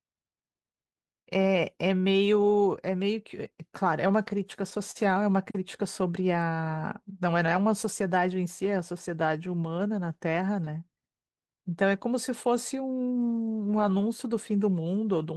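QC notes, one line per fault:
4.91–4.97 s: short stall from a late packet. The jitter buffer ran dry, so about 39 ms of speech is held and stretched, nothing lost, leaving a brief drawn-out buzz.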